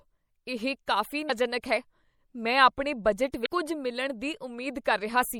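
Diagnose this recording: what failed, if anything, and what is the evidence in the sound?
At the codec stage, a likely low-bitrate MP3 encode, consistent with about 64 kbps, leaves the speech watery and swirly throughout, with dulled treble and smeared consonant edges.

Damaged data in the compressed stream makes the decoder lose frame sync, producing short glitches at 1.26–1.30 s after "ਇਹ ਕਾਫ਼ੀ" and 3.42–3.47 s after "ਆਪਣੇ ਬਜਟ".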